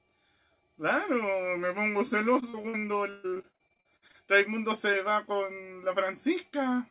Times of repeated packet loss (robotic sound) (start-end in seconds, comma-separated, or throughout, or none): 2.40-4.16